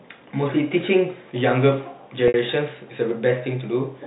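At 2.28 s the speech hits packet loss with pitch repetition: about 60 ms, to 2.34 s, goes missing, which fits three lost packets. The receiver loops the last pitch period, giving a brief held, buzzy tone. On a spectrogram, identical repeated harmonic stripes taper off before the speech resumes.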